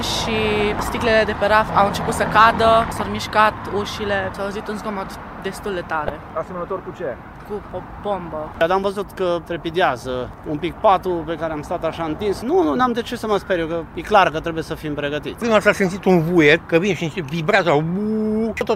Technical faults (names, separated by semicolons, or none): corrupt frame decoded